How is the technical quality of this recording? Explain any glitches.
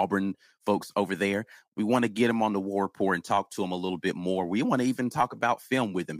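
Nothing to worry about here: there are no glitches to explain anywhere in this recording.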